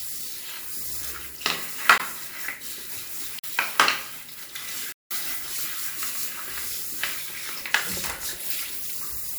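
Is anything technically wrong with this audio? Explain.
Yes. Three blocks of digital silence appear, at 1.98 s (19 ms), 3.39 to 3.44 s (46 ms, fitting a 2048-sample buffer) and 4.92 to 5.11 s (186 ms, fitting 8192 samples). Each likely comes from a missed buffer fill that leaves hard-edged gaps, heard as a tick, a pop and then a clear hole. The waveform shows flat lines, and the spectrogram shows blank vertical gaps.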